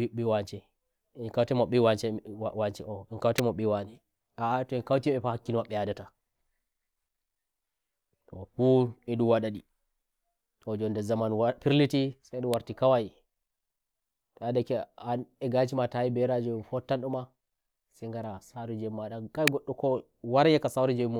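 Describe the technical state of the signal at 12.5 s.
An electrical switching spike at 12.54 s: a sharp snap peaking around -10 dBFS over the speech, likely a nearby switch or static discharge arcing into the line.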